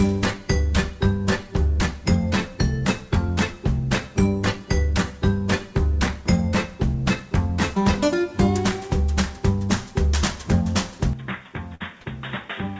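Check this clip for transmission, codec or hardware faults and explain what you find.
Two faults show up near the end of the clip, both in the last two seconds, on top of a call path whose 8 kHz ceiling is consistent with a wideband codec such as G.722.

Input switched to a poorer device, from 11.13 s to the end. The sound abruptly narrows to nothing above 3.8 kHz, drops by roughly 10 dB, and gains a new background noise floor sitting around 30 dB below the signal, with no gap at the change. That pattern most likely comes from the capture switching to a different microphone or a headset's call profile, which has a narrower band and its own tone and noise. The result is a sudden dull, boxy quality.

Burst of packet loss, from 11.75 to 11.83 s, inside that degraded stretch. The receiver had no data for this span, so it extended the last received sound for about 53 ms, fading it as a held buzz or hiss, and then jumped ahead. 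About 60 ms of the original audio is simply gone, so the sound resumes slightly further along than it should.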